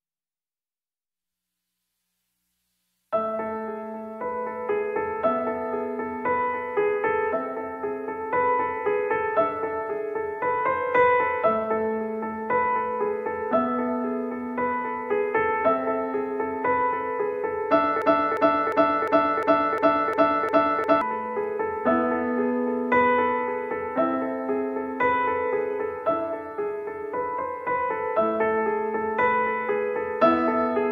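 From 18.02 s to 21.01 s, a short fragment of about 0.35 s repeats exactly, back to back, eight times, like a stuck record, before normal playback resumes. This is a broken-record loop. The likely cause is a player, encoder or stream that stalled and kept resending the last fragment in its buffer. Whatever audio belonged in those three seconds is lost, replaced entirely by the repeating piece.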